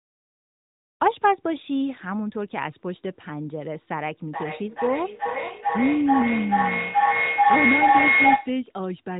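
From 4.33 s to 8.65 s, a feedback echo between two devices recirculates the speech about every 0.4 s, each pass thinner and more ringing, building to about 6 dB above the speech itself. A spectrogram shows stacked, evenly spaced copies under the narrowband 3.8 kHz ceiling.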